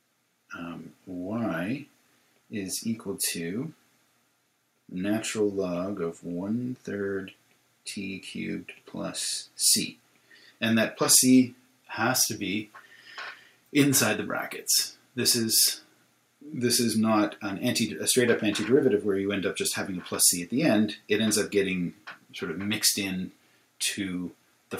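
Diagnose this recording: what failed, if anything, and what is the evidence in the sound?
Nothing failed here; no stage in the chain, from wiring through to playback, leaves any audible trace of trouble in the sound.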